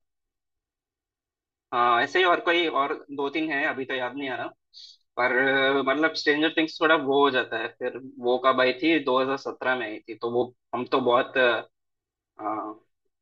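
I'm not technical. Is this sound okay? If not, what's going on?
No. Throughout the whole clip the speech sounds hollow and phasey, a little like talking down a tube. This is channel delay (comb filtering). One of the two stereo channels arrives roughly 3 milliseconds after the other, and when they are combined into one, parts of the sound cancel out. The cancellations fall at evenly spaced pitches starting around 200 Hz, scooping fixed gaps out of the voice.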